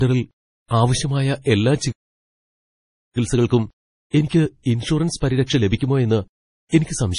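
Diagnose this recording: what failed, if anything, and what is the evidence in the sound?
The whole clip carries heavy MP3 compression damage, most likely from a low-bitrate encode at the codec stage, around 32 kbps. Nothing is present above 10.5 kHz, so the treble is cut flat. The speech sounds watery and swirly throughout. With so few bits, the encoder zeroes weak frequency lines, and they flicker on and off from frame to frame. Attacks smear, and s sounds pick up metallic chirps.

A playback stall cuts the speech from 1.91 s to 3.17 s. The output goes silent in mid-flow for about 1.24 s. The likely cause sits at the playback buffer. Either the player ran out of data, or its thread was blocked. Output resumes only once the player recovers. This is a stop in delivery, not a gap in the speech itself.

Time-compressed catch-up follows directly, from 3.17 s to 6.17 s. Over those three seconds the speech runs at 1.1 times normal speed. 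The pitch stays normal, so it sounds hurried rather than raised. The player is shrinking the backlog built up during the stall. It cuts out small pieces of audio and cross-fades across the joins. That is a playback-stage fix, not a codec one.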